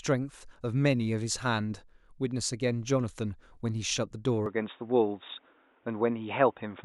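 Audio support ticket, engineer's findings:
Speech dulls abruptly at 4.46 s, holding to the end. Nothing above 3.8 kHz. No gap at switch. Level shifts a few dB. New noise floor well below speech. Likely input switched to a poorer device, a narrower-band microphone path.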